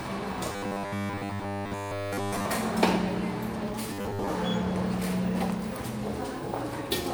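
Robotic sound from repeated short buffers appears from 0.52 to 2.45 s and again from 3.93 to 4.30 s. In both stretches the sound takes on a rigid, metallic buzz locked at 100 Hz. This is likely because fresh audio arrived too slowly and the playback filled the gaps by looping a 10 ms slice. Most of the real material is skipped, so the buzz only loosely tracks the original sound's shape.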